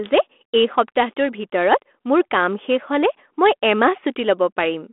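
No technical faults are present: the speech comes over a G.726 ADPCM link at 32 kbit/s, with the usual telephone band of about 250 Hz to 3.4 kHz, nothing above 3.8 kHz, and only the light coding texture expected at that rate.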